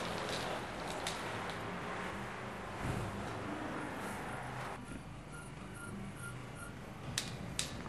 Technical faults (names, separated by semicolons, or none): compressed frames skipped; channel delay (doubling)